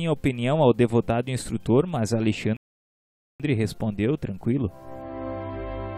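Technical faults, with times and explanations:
2.57 to 3.40 s, rebuffering stall: playback halts into silence for about 0.83 s, a flat gap on the waveform and blank spectrogram columns, then resumes exactly where it stopped.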